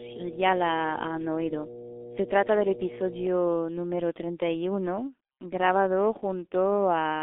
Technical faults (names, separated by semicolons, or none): G.723.1 codec; mains hum